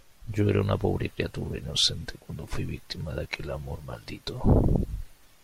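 No technical faults can be heard anywhere in the recording, which holds steady throughout.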